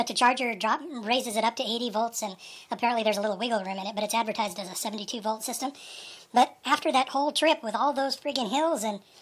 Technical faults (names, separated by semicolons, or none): wrong sample rate